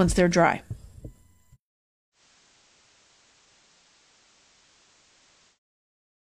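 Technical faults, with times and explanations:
2.12–5.59 s, digital radio blending to analogue: the receiver loses its digital stream and cross-fades over 114 ms to the station's FM broadcast. Hiss rises to roughly 30 dB below the signal. Level shifts about 1 dB. It blends back at 5.59 s.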